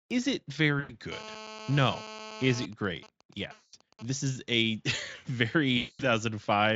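At 0.79 s, right after "is it", VoIP packet loss concealed by the speech codec takes over for about 100 ms. The decoder repeats its last pitch and filter with falling gain, so the sound smears into a fading buzzy tone. On a spectrogram, the harmonics flatten into stretched horizontal lines that dim toward 0.93 s.

From 1.12 to 2.66 s, GSM phone buzz from a 2G handset in a call sits about 14 dB below the signal. The circuit rectifies radio bursts arriving 217 times a second, giving a hard rasp. A spectrogram shows a dense comb of harmonics on a 217 Hz spacing, and the waveform shows a regular pulse train.

From 2.73 to 4.05 s, before "is a", faint GSM signalling bursts appear as even ticks with a longer buzz twice a second. These are regular 217 Hz pulses, seen as evenly spaced vertical ticks. Within this span, at 3.53 to 3.74 s, a second packet-loss concealment fills about 200 ms with decaying, tonal smear.

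A third concealment covers 5.77 to 6.06 s, about 220 ms, and shows the same fading, flattened harmonics.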